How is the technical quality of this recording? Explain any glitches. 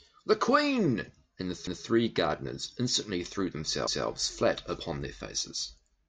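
The speech has a chunk-joining problem: overlapping chunks. At 1.67 to 1.87 s, right after "and the", a 200 ms slice plays twice before "gardeners instantly threw", and the same happens at 3.87 to 4.07 s, just ahead of "flat upon their". The audio was handled in 2 s chunks that each start 200 ms before the previous one ended, so every seam gives a quick stutter or click, evenly spaced.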